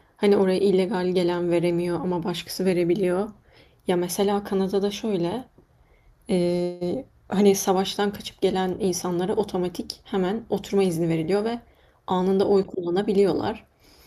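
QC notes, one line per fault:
6.63–6.96 s, call audio freeze: packets were likely held up in transit, draining the jitter buffer, so the receiver extended the last sound as a fading buzz for about 176 ms. The speech then resumes where it stopped, with nothing missing, and everything after arrives 176 ms later.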